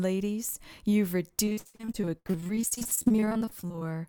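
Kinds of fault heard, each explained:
repeated packet loss (robotic sound): choppy sound from 1.45 to 3.91 s; dozens of lost packets leave gaps up to 63 ms, each filled by extending the previous sound.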